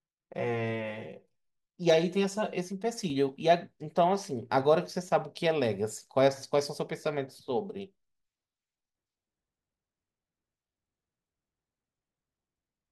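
From 0 to 3.10 s, channel delay causes comb filtering: one channel lags by around 5 ms, so the mono sum notches from near 100 Hz, sounding hollow and phasey.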